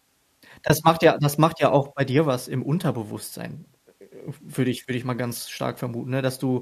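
At 0.68 s the speech drops into a brief gap of about 20 ms, which fits two lost frames. This is AAC frame loss with muting: the decoder had nothing for those frames and zeroed their spectrum, so the overlapping windows fade the signal down and back up across the hole rather than cutting it abruptly. The result is a soft-edged dropout. The short frames involved point to low-delay AAC compression as the likely codec, which here adds only light coding damage.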